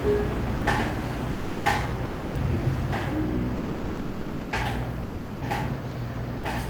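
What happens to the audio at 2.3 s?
Sound dropped by the voice detector, from 2.05 to 2.35 s: for about 300 ms the sound gives way to steady comfort noise, then returns. The likely cause is the sender's voice detector, probably Opus DTX, mistaking this sound for background and briefly stopping transmission.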